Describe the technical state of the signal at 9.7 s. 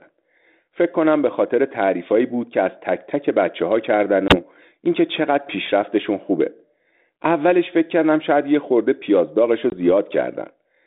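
A hard-edged dropout from 9.70 to 9.74 s, about one packet lost, then slightly distorted speech. This is packet loss on an ADPCM call, throwing the decoder's predictor and step size out of step.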